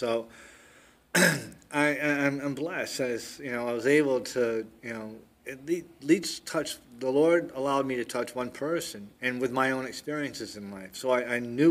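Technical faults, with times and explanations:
6.24 s, dropped buffer (overrun): a small jump in the sound, where a very short slice, roughly a millisecond or two, is missing and the two sides butt together. This is likely caused by the program failing to read a buffer before the hardware overwrote it.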